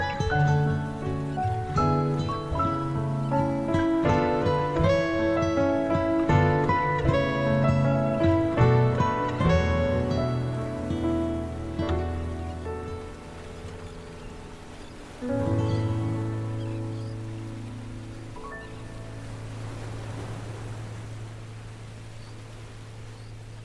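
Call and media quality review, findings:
No audible defects found across the clip; no action required.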